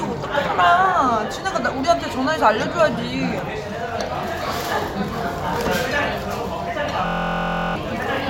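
A recording of everyday sounds that breaks into a system hang loop from 7.06 to 7.76 s. A single 23.22 ms slice of audio repeats exactly, 30 times, producing a steady buzz at 43.1 Hz in place of the real signal. The computer or audio driver froze while the hardware kept replaying the same ring buffer, and the loop length fits a 1024-sample buffer. Roughly 0.7 s of the intended audio is lost.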